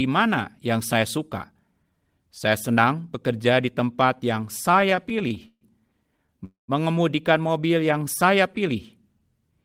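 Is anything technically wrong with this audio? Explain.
Yes, there are four delivery problems, all bunched into the back half of this speech clip.

From 4.71 to 5.64 s there are repeated stalls (stutter). Packets kept turning up late, so the jitter buffer drained eleven separate times and the receiver had to bridge each hole by extending the last bit of sound. Those patches add up to about 257 ms, roughly 28% of that stretch, with the longest about 132 ms. It sounds halting and draggy, though nothing is actually lost.

At 6.26 s there's a short stall from a late packet. One packet missed its slot, the buffer ran dry, and the receiver stretched the preceding sound for about 27 ms until it showed up, then carried on from the same spot. You hear a syllable held a touch too long, with a faint buzzy or dipping quality, and the timing slips back by that 27 ms.

Right after, from 6.45 to 6.71 s, comes a call audio freeze. 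The sound holds on as a buzz that fades out, then drops to silence for about 140 ms before picking up exactly where it left off. In total about 234 ms is inserted and nothing goes missing. That's likely packets being held up in transit long enough for the buffer to empty completely.

From 7.54 to 8.52 s there's a jitter buffer slow-down. With the buffer running low or its target delay just raised, the receiver rebuilds its reserve by repeating single pitch periods and slivers of pauses over and over. That adds about 92 ms, so the passage plays at roughly 91% speed. The pitch stays put, but sounds get drawn out.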